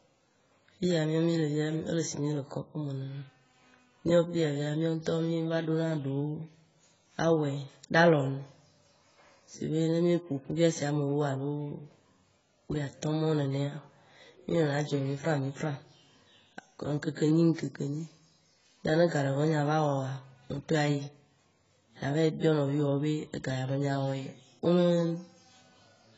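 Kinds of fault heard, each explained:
AAC compression: The sound is dull and smeared, with nothing above about 7.7 kHz and a warbling, fizzy texture on sustained sounds and sibilants throughout the speech. This is likely low-bitrate AAC-LC coding. Each frame's spectrum is quantised against a hearing model, and when bits are scarce the encoder drops the top band and leaves gaps or substitute noise lower down. The heavy damage fits a bitrate of around 16 kbps.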